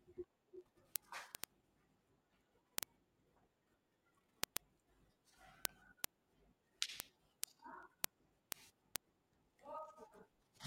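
Word clock ticks run from 0.13 to 10.65 s: an unlocked receiver slips one sample roughly every 40 ms, giving sharp, uneven ticks, seen as evenly spaced vertical lines on a spectrogram.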